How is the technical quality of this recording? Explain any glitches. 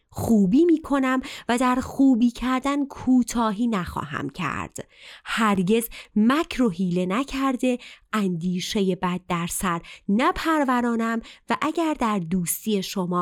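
Two brief glitches interrupt the speech, both blocks of digital silence. At 4.35 s there is a sharp tick where the sound drops out for about 2.7 ms, and at 5.55 s a slightly longer tick or dip marks a gap of about 5.3 ms. The audio cuts abruptly to silence and back with no fade. The two lengths fit one and two 128-sample buffers that the program likely failed to fill in time.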